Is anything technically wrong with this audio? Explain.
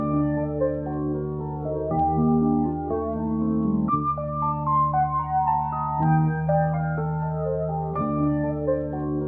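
No, nothing technically wrong turns up in this music clip.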